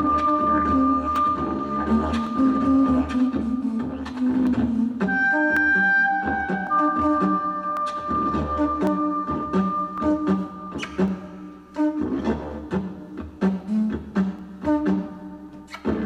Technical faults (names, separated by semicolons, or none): clock drift buffer slips